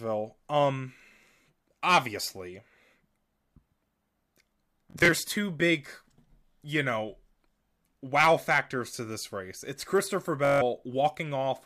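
Bluetooth stutter at 4.91–5.09 s, before "two big", and 10.45–10.62 s: lost packets repeat short slices as a buzz, skipping 85 and 149 ms.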